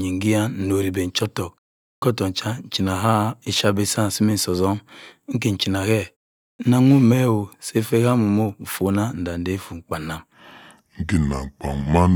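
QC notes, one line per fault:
1.96 s and 6.53 s, clipped start after a pause: after pauses of about 0.46 s, each onset loses about 61 ms and the sound begins abruptly without its first sounds. The output device drops into a sleep state during silence and needs that time to wake before audio passes again.
10.34 s to 12.15 s, section at the wrong speed: the final stretch plays at 0.749 times normal speed, so it is slower and deeper, roughly five semitones down, with pitch and tempo changing together. The likely cause is this section being fitted to the wrong clock during editing or playback.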